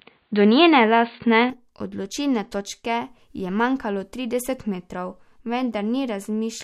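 Input switched to a poorer device, 0.0 to 1.5 s: speech is dull and boxy, with nothing above 4.6 kHz, likely from a narrower-band microphone, then clears seamlessly before "odločilne točke je manjkalo".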